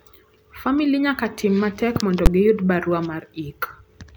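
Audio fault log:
2.26 s, invalid numbers at full scale: a single hard bang in the speech, about 12 ms long, which fits one 512-sample processing block. A calculation there produced infinite or undefined values, and the output was pinned to the maximum level for the whole block. The block is so short that the jump up and back down fuse into one bang. Unlike clipping, it has no relation to the loudness of the speech around it, and unlike a small click, it sits far beyond the speech's peaks.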